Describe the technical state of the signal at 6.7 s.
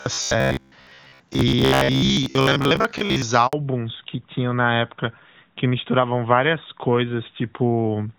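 At 6.7 s the call is in a fallback to narrowband, from 3.53 s to the end, consistent with a switch from HD Voice to AMR-NB at 12.2 kbit/s. Nothing above 4 kHz remains, so the speech sounds duller and rougher.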